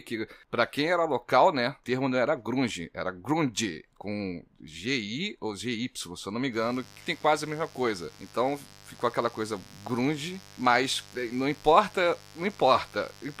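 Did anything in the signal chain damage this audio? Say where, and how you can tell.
Yes: a steady, raspy buzz enters the speech at 6.51 s, after "não me", and runs to the end. It's mains buzz from analogue wiring, 50 Hz switching spikes with harmonics, roughly 25 dB below the speech.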